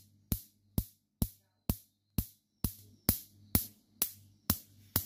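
At 2.79 s the sound and its background noise jump up together by about 8 dB and stay louder to the end. This is a sudden gain jump, likely from a digital gain change applied between two samples with no ramp.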